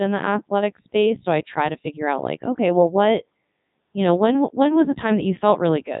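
From start to finish the speech carries Codec 2 vocoder damage, robotic and buzzy, resynthesised from pitch and envelope at about 3.2 kbit/s, with nothing above 3.8 kHz.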